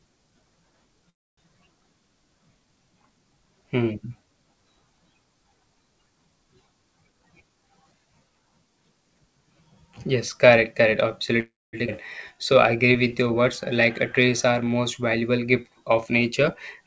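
At 1.10 to 1.39 s and again at 11.40 to 11.75 s, just after "correct correct", the speech halts in a call audio freeze: a pause of mostly silence, likely from delayed packets draining the jitter buffer. Speech resumes where it stopped, with nothing lost.

From 7.07 to 8.57 s a jitter buffer speed-up trims pitch periods, running the speech about 18% faster at unchanged pitch. It sounds hurried rather than jumping.

At 11.87 s a skip ahead jumps straight forward over roughly a fifth of a second of speech. Unlike the freezes, material is missing and there is no gap.

Two jitter buffer slow-downs follow, from 12.34 to 13.74 s at 93% speed and from 14.20 to 14.82 s at 89%, just before "valuable gift of". Repeated pitch periods stretch the sounds at the same pitch. The audio drags smoothly instead of stopping. Throughout, the band ends at 8 kHz, which fits a G.722 call codec.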